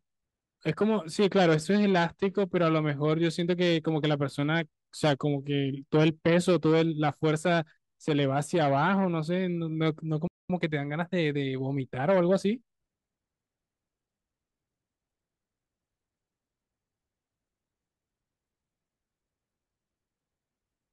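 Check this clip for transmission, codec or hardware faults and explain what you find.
Two playback faults sit together around the midpoint of the speech: a stall followed by a stretch of time-compressed catch-up.

Playback stall, 10.27 s to 10.50 s: the speech cuts out in mid-flow and the output goes completely silent for about 220 ms, then playback resumes. The likely cause is the player running dry of buffered data, or its output thread being blocked, so that nothing reached the device until the pipeline recovered.

Time-compressed catch-up, 10.50 s to 12.68 s: straight after the gap, the speech runs hurried at 1.1 times normal speed while its pitch stays unchanged. The player is shedding the backlog the stall left behind by removing short slices of audio and cross-fading across the joins. The passage stays hurried until delivery returns to real time at 12.68 s.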